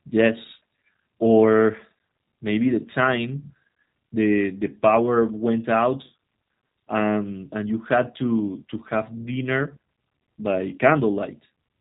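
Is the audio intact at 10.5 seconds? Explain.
No. At 10.5 s the speech is still coming through the G.729 codec damage that runs through the whole clip. The codec rebuilds each 10 ms frame from a vocal tract filter, a pitch predictor and a few pulses, and nothing above 4 kHz survives, which fits an 8 kbit/s stream. The result is plainly rough and synthetic. A simple low-pass filter would only dull the sound, but here the voice itself sounds rebuilt, not merely muffled.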